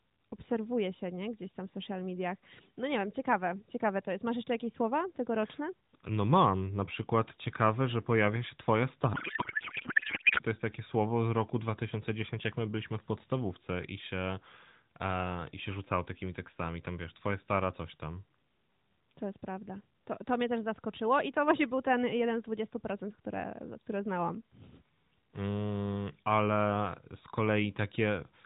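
Speech, carried over the AMR narrowband mobile codec, with nothing above 4 kHz and a light coding texture that fits the 12.2 kbps mode. From 9.14 to 10.41 s, after "że pojawia się twoja", there is a codec payload misread. The speech turns into garbled noise and warble that barely tracks it. Octet-aligned AMR frames are being unpacked as bandwidth-efficient ones, so every field lands in the wrong place. Clean speech returns at "to jest takie słowo".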